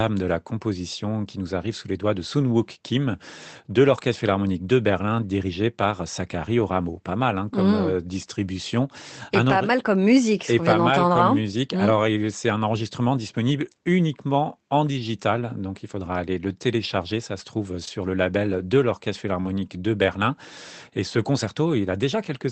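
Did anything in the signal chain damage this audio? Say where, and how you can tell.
Yes. The network stage dropped single packets. The packet after each one carried a low-bitrate copy, so the damage is lost packets rebuilt from error correction. Each rebuilt 20 ms stretch sounds rougher and noisier, at 4.27 s, 6.59–6.61 s, 17.87–17.89 s and 19.45–19.47 s. No gap is heard.

Twice, audio reached the decoder too late. About 20 ms went missing near 17.85 s and 40 ms near 19.41 s. This short concealed packet loss sounds like a brief smear or wobble at 17.85–17.89 s and 19.41–19.47 s. The receiver continued the last sound, then blended back.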